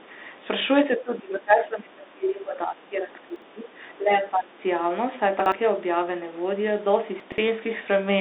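Speech runs through a Bluetooth CVSD headset codec for its whole 8 seconds, squeezed into a line band of roughly 250 Hz to 3.7 kHz with nothing above 3.8 kHz, which fits a 64 kbit/s CVSD link. The codec damage is plainly audible. Its one-bit delta coding cannot slew fast enough on loud, bright sounds, so sibilants turn scratchy and a granular hiss sits under the speech. A simple narrowband filter would dull the sound but stay clean, without that grain or the overload distortion.

From 0.92 to 3.82 s, and again from 3.98 to 4.63 s, the level sinks and the top end thins in uneven stretches. The first stretch drops by up to about 20 dB and the second by about 10 dB. This is speech suppressed in double talk, most likely an echo canceller ducking the talker while the far side was also speaking. It shows as dips in gain and tone.

Chunks out of order appear at 3.3 to 3.42 s, 5.4 to 5.52 s and 7.2 to 7.38 s. 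In each, a 60 ms block plays late, one block behind at the first two and two blocks behind at the last. The result is a jumbled moment. Nothing is missing, which sets this apart from dropouts, since the sound is all still there, just in the wrong sequence.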